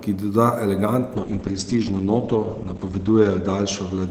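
At 1.16 s a call bitrate drop sets in and lasts to the end of the clip. The encoder's budget falls from 32 kbps to 9 kbps, bottoming out for about 1.7 s, so the speech is coded far more coarsely and turns rough and watery. The audio bandwidth also shrinks from 20 kHz to 8 kHz, dulling the speech. On a spectrogram, everything above 8 kHz vanishes behind a flat ceiling.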